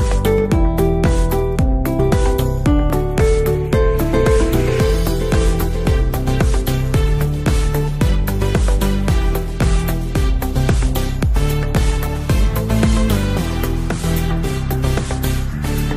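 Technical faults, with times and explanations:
2.90–14.73 s, clock drift buffer slips: a short click recurs every 2.96 s, each a small block of samples dropped or repeated. This is likely from two clocks differing by about 500 ppm. The strict regular spacing sets it apart from random dropouts or underruns.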